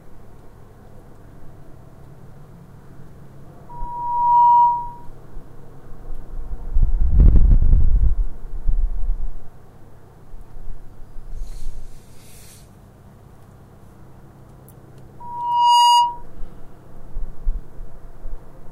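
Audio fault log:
3.69–5.08 s and 15.20–16.23 s: loudspeaker feedback squeal. The microphone–speaker loop runs away at 957 Hz, swelling within a second to just above the sound. On a spectrogram it shows as a brightening horizontal line.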